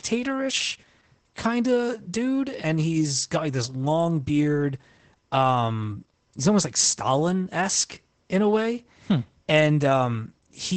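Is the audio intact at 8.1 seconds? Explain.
No. Opus voice compression covers the whole clip, 8.1 s included. Its SILK coder at 12 kbps drops everything above 8.6 kHz, so the speech sounds plainly muffled.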